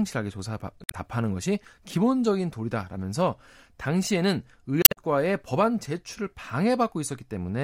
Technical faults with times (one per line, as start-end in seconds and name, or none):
0.82-0.94 damaged data in a compressed stream
4.82-4.97 damaged data in a compressed stream